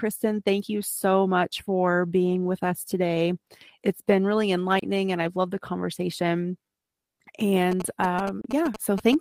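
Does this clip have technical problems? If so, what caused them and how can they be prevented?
Yes. At 4.79 s, just after "been really" and before "and I've loved the", the speech cuts to silence for about 29 ms and then resumes, with a little of the audio missing, as if it had kept playing through the gap. The same short hole returns at 8.41 s, again lasting about 29 ms. This is likely a Bluetooth dropout: audio packets reached the headphones too late and were discarded, and a gap this short fits roughly two lost packets. Keeping the headphones close to the source, with no body or obstacle between them and less 2.4 GHz traffic nearby, helps prevent it.

From 7.72 s to 9.15 s, a galloping dit-dit-dit of short buzzes sits under the speech, about 10 dB below it, with a buzz tone near 217 Hz. These are GSM signalling bursts. A 2G phone nearby sent short groups of radio bursts while talking to the network, and the audio circuitry rectified that radio energy into an audible buzz at the 217 Hz burst rate. 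Keeping mobile phones well away from the recording gear and cables, or switching them to flight mode, prevents this.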